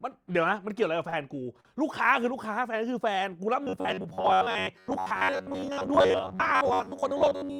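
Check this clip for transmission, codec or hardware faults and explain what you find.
Two kinds of transmission fault are audible, both consistent with network delivery problems.

Short stalls from late packets occur at 1.09–1.14 s and 1.60–1.67 s. In each, a packet arrived late, the jitter buffer ran dry, and the receiver stretched the last sound until the data caught up, then resumed from the same point. The holds last 31 ms and 43 ms, and the delay grows by the same amounts. Nothing is lost. A sound simply lingers slightly too long, with a faint buzz or dip.

From 3.64 s to the end, the speech takes on a robotic sound, most likely from repeated short buffers. New audio arrived too infrequently, so the software filled the gaps by replaying the most recent fragment while skipping real audio, roughly two thirds of it. The 93.8 Hz buzz fits a repeated block of about 10.7 ms. The result is a rigid, metallic buzz that only loosely tracks the speech.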